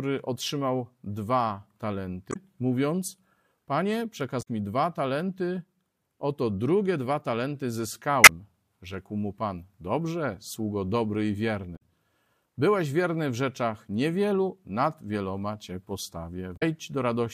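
At 2.29 to 2.36 s, 4.39 to 4.48 s, 8.23 to 8.29 s, 11.73 to 11.82 s and 16.53 to 16.63 s, the speech is broken by short glitches lasting about 70 to 95 ms each, the sound of damaged data in a compressed stream. At each point the decoder misread corrupted frames and lost sync until it found a valid header. On a spectrogram each shows as a brief smeared or blocky patch breaking the speech pattern, and the waveform shows an abrupt discontinuity.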